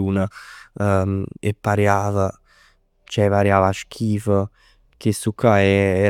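No technical faults are audible anywhere in this recording.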